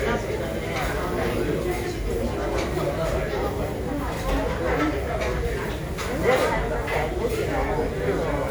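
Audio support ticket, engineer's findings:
Generation loss, throughout the clip. Swirly, smeared, hollow texture beyond what a single encode at this rate would give; transients blurred. Band extends to about 20.1 kHz, so not a bandwidth issue. Likely cause: repeated lossy transcoding, consistent with a few passes through a WMA 1 chain near 96 kbit/s. Each re-encode quantises on a shifted frame grid, so noise and spectral holes accumulate.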